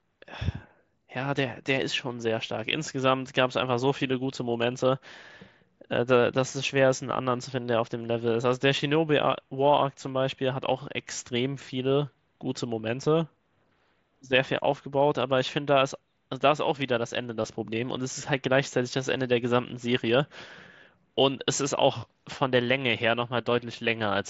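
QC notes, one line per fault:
17.43 s, concealed Bluetooth headset packet loss: about 15 ms of the speech went missing on the headset link, which fits a couple of dropped frames, and the receiver covered the gap by repeating a matching stretch of recent waveform within the mSBC wideband sound.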